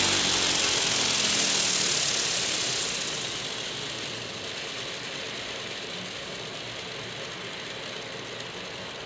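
Aliasing runs throughout: downsampling without an anti-alias filter, fitting a 16 kHz rate, folds content above 8 kHz back down, nearly as loud as the real sound, making it gritty and metallic.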